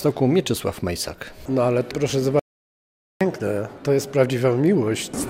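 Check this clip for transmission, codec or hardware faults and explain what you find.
One fault is present: an audio dropout to silence from 2.39 s to 3.21 s, removing about 0.81 s of material. The sound stops abruptly mid-flow and resumes just as abruptly, and the gap between is silence with no room tone or noise floor. That points to the input path having likely been lost, through a disconnected device, failed link or accidental mute, while recording continued writing silence. Whatever occurred during that interval is unrecoverable.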